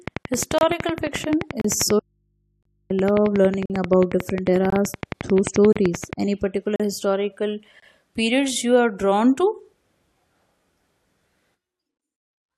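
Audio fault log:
0.08–6.14 s, train of clicks: a steady ticking of about 11.2 clicks per second, around seventy in all, each with much the same shape and peaking roughly 15 dB above the sound. It continues through pauses as well as sound, and that steady, machine-like pace sets it apart from random crackle or damage in the recording itself. It likely comes from interference from nearby equipment or a faulty connection or power supply.
0.58–0.61 s, 1.61–1.65 s, 2.63–2.65 s, 3.66–3.70 s, 4.70–4.73 s, 5.73–5.76 s, 6.76–6.80 s (just before "historical periods you are") and 7.80–7.82 s (between "particular historical" and "periods you are drawn"), gap between stream segments: hard-edged silent holes of 23 to 43 ms recur about once per second. Timestamps between one-second segments leave a gap, and the player fills it with silence. Nothing is lost, and the sound resumes where it left off. That is what separates these gaps from a dropout.
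2.00–2.90 s, audio dropout to a faint residue: the sound cuts off abruptly mid-flow for about 880 ms, and only mains hum remains, about 45 dB below the normal level. The signal itself was likely lost while the downstream path stayed live and picked up hum from the open input. Unlike the brief segment gaps, this one lasts almost a second, isn't silent, and the audio from that stretch is missing.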